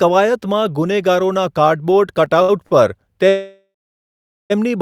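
At 2.42 s and 2.67 s, short stalls from late packets hold the speech for 65 ms and 40 ms: the jitter buffer ran dry, so a sound is stretched briefly. From 3.29 s to 4.52 s a call audio freeze fills 1.2 s with a fading buzz, then about 800 ms of silence, likely from packets held up in transit, before speech resumes intact.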